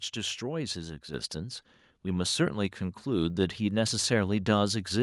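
A speech clip in which the level abruptly gets louder at 1.14 s. Everything in the recording steps up by about 5 dB at once and stays there, with no gradual ramp. This is a microphone volume stepped up fault: the call software judged the microphone too quiet and raised the device's input volume in a single jump. Because the gain is applied before anything else, the background rises along with the speech.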